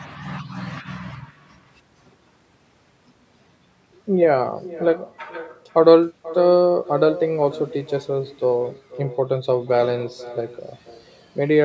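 A speech recording, band-limited to 8 kHz by normal call microphone processing, carries an echo with no canceller throughout: a thinner copy about 16 dB down returns roughly half a second later, distinct enough to separate from ordinary room reverberation.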